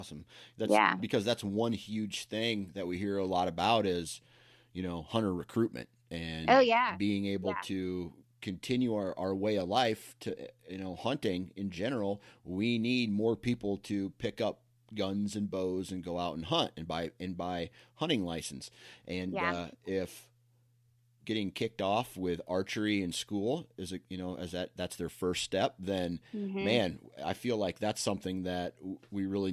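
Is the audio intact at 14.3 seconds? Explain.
Yes, the speech at 14.3 seconds plays through cleanly, with no dropout, click, distortion or other fault at that moment.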